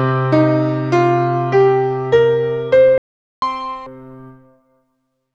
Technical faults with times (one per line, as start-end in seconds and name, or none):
2.98-3.42 playback stall
3.42-3.86 catch-up at higher speed